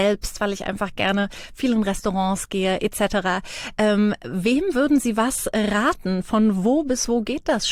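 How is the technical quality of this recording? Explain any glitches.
No glitches or technical faults are audible here.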